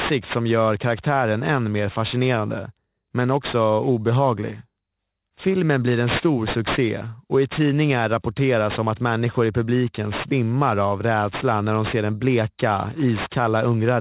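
From start to finish the speech carries aliasing: the audio was brought down to a lower sample rate, consistent with a drop from 44.1 kHz to 8 kHz, without an anti-alias filter first. Everything above the 4 kHz fold point reflects back down as unrelated tones, sitting roughly 15 dB below the signal, so sibilants sound gritty and metallic. On a spectrogram, energy runs hard up to 4 kHz, with mirrored, inverted harmonic traces crossing the true ones.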